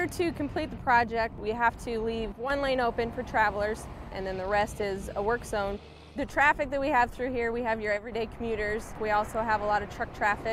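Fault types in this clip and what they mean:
One channel drops out: at 2.32–2.50 s and 7.97–8.12 s the level falls abruptly by about 6 dB, then recovers, with nothing else changing. This likely comes from one of two identical channels briefly going missing, which halves the mono sum.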